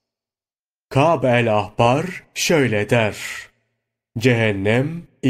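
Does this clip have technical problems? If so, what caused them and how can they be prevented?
No, nothing technical gets in the way here; the speech comes through without any problems worth flagging, so there's nothing to trace back or guard against.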